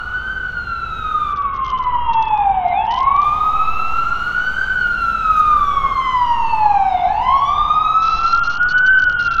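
From 1.33 s to 3.24 s the top end dulls and a gritty, grainy noise rides on the sound, and the same thing returns at 8.02 s and lasts to the end at 9.4 s. Both are a Bluetooth SBC bit pool drop. The link briefly cut the bits per frame, which fits a fall from a bit pool of 28 to about 7, near 66 kbps. The highest sub-bands get little or nothing, so treble dulls, and the remaining bands are coarsely quantised into that grit.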